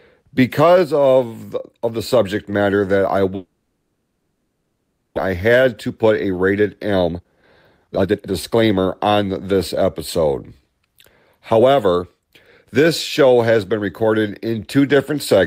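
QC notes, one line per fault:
3.35–5.34 s, long network dropout: Right after "subject matter that I", the sound smears into a fading buzz lasting about 1.8 s rather than falling silent. Speech resumes later, with a stretch missing. The likely cause is audio not arriving, so the receiver extended the last sound.
5.86–9.83 s, jitter buffer speed-up: Speech runs about 20% fast at unchanged pitch and sounds hurried. After the dropout the buffer held too much audio. The receiver trimmed many short pitch-period slices, roughly 0.7 s in all, to cut the delay.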